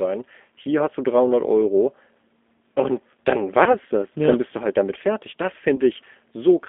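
A speech recording carried over G.729 at 8 kbit/s, confined to a line band of roughly 250 Hz to 3.5 kHz, with plainly audible codec damage. Unlike a clean band-limited telephone line, the voice has a rough, slightly synthetic grain from the sparse pulse excitation rebuilt through a vocal-tract filter. There are three short gaps of VoIP packet loss concealed by the speech codec, at 0.63–0.65 s just before "hast du", at 3.64–3.77 s, and at 5.76–5.81 s, each consistent with about 20 ms of lost audio. These are not silent dropouts. The decoder stretches the last sound into a fading buzzy tone or coloured noise, and the voice stays weak for a short while after each gap.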